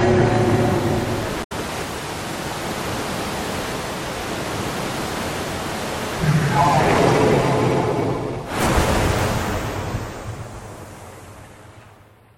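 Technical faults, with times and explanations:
1.40–1.52 s, damaged data in a compressed stream: corrupted bytes make the decoder misread frames and lose sync while hunting for the next valid header, giving a brief disruption of about 120 ms. A spectrogram and waveform show an abrupt discontinuity there.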